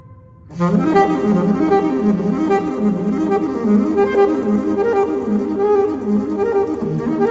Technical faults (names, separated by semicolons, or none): none